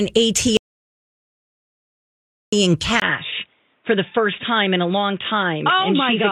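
At 0.57 s the speech cuts off into total silence until 2.53 s, an audio dropout to silence lasting about 1.96 s. The input was likely lost while recording continued, so the waveform runs flat and the spectrogram goes completely blank, without even room tone.

At 3.00 s, after a 20 ms silence, the input switched to a poorer device, likely a narrower headset or second microphone. From there to the end the sound turns dull and boxy, with nothing above 3.8 kHz. The spectrogram shows a hard ceiling, and a faint new noise floor sits roughly 45 dB down while the waveform level stays about the same.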